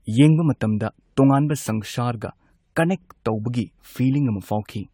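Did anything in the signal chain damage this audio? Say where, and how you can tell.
Yes. Generation loss runs through the whole speech clip, at the codec stage, likely from repeated lossy re-encoding: the sound fits AAC-LC at around 96 kbit/s passed through the codec something like seven times. Each decode and re-encode quantises again on a shifted frame grid, so noise and spectral holes accumulate. The result is more swirly, smeared and hollow than a single pass at that rate would give, with blurred consonant attacks and nothing above 20 kHz.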